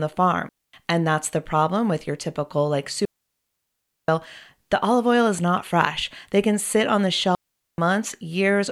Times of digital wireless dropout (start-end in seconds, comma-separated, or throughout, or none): 0.49-0.73, 3.05-4.08, 7.35-7.78